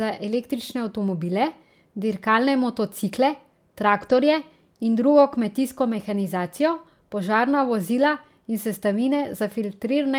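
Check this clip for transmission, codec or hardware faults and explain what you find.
There's one fault, a lost packet rebuilt from error correction, between 3.97 and 4.19 s. No gap, but about 120 ms comes out rougher and noisier. The decoder played the low-bitrate backup copies carried in the following packets, which fits around six lost packets.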